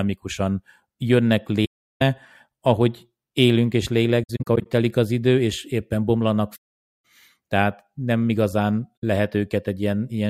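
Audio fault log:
1.65–2.02 s, 4.23–4.67 s, 6.55–6.94 s, 9.00–9.04 s: AAC frame loss with muting. The speech drops to silence, for about 0.36 s before "ahogy élünk és", for 0.49 s after "idő és éppen bomlanak", and for a brief 64 ms after "nem igazán". At 4.23 s the dropouts are scattered, with short holes of up to roughly 70 ms spread over 0.43 s. The decoder zeroes the missing frames, and the overlapping windows fade the sound out and back in, so each gap has soft edges. A concealing decoder would fill the gap with repeated or smeared sound rather than leaving silence.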